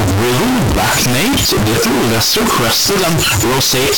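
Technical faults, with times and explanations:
Throughout, float read as integer: near-square waveform at an almost fixed, high level, noise as loud as speech, broadband spectrogram; likely 32-bit float decoded as integer.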